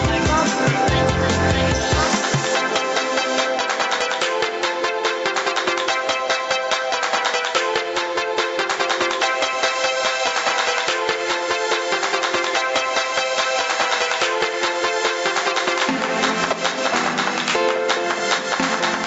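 Gain pumping runs through the whole clip: the level ducks by around 5 dB under each loud moment, squashing the dynamics. That's likely a fast limiter or compressor fighting a mic gain set far too high. The top end stops around 8 kHz, which fits a call path.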